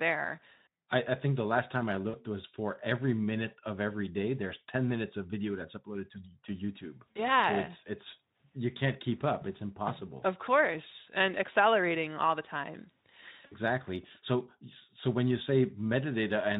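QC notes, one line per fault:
2.09–2.16 s, 7.12–7.21 s, 13.45–13.54 s: VoIP packet loss concealed by the speech codec. About 40, 40 and 60 ms drop out. The Speex decoder extrapolates the last sound into a fading, buzzy or noisy smear, which fits two or three lost 20 ms frames.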